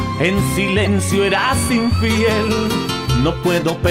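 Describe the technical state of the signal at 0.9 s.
At 0.9 s the signal has just come out of a corrupt frame decoded event, which runs from 0.84 to 0.87 s, ending about 30 ms before the point asked. Flipped bits in a handful of consecutive compressed frames were decoded rather than concealed, so misread gains and codes placed energy at the wrong frequencies for those frames. The result is a short chirp, blip or burst of noise, loud enough to approach about -5 dBFS.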